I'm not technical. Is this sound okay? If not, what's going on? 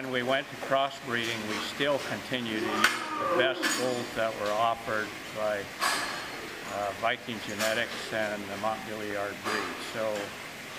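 No. There's a click or stutter at about 4.07, 6.59 and 9.11 seconds, evenly spaced about 2.5 seconds apart, as if the sound skips back for an instant. This is a fault called overlapping chunks. The audio was handled in 2.5-second pieces, and each new piece began slightly before the previous one finished. At every join, a sliver about 20 milliseconds long plays twice, and that tiny repeat is the hiccup you hear.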